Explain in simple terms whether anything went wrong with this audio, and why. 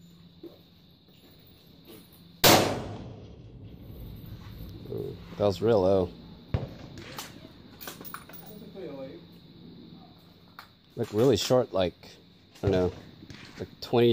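Nothing went wrong that could be heard: on listening, no part of this audio stood out as broken, interrupted or distorted.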